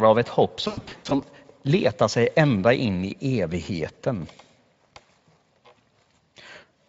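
From 0.67 to 1.14 s, just after "av ett hopp" and before "letar sig ända in", VoIP packet loss concealed by the speech codec breaks up the speech. About 280 ms of audio went missing in bursts spread over roughly 440 ms, the longest gap 100 ms. Instead of silent holes, the Speex decoder extrapolates from its last pitch and filter, stretching the sound into a buzzy tone or a coloured noise that fades, and the voice stays weak briefly after recovery. A plain dropout, by contrast, would simply cut to silence.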